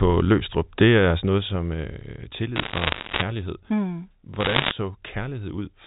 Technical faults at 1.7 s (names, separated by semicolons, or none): zipper noise